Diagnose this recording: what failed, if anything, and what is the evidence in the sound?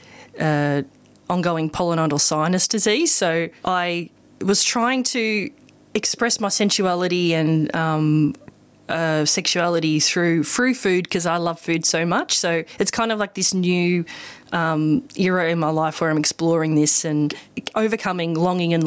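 Gain pumping runs throughout: the gain ducks by around 15 dB under each loud syllable, likely from excessive input gain driving a fast limiter.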